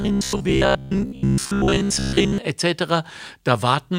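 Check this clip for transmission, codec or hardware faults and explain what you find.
One fault is present. From 0.02 to 2.38 s the speech has robotic sound from repeated short buffers: a rigid, metallic buzz at 66.8 Hz that still roughly tracks the words. The likely cause is late-arriving audio, with roughly 15 ms slices replayed over most of that stretch. On a spectrogram this shows as evenly spaced horizontal harmonic lines, and the waveform shows identical repeating segments.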